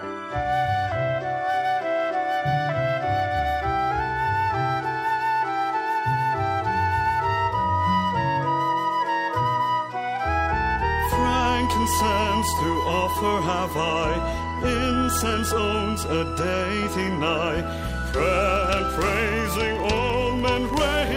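A filter restarted on every block runs from 18.56 s to the end: the filter drops its state at each block boundary and starts again from zero, producing a small transient each time. This is heard as a buzz of about 23.4 Hz that rises and falls with the audio's level, which fits a 2048-sample block.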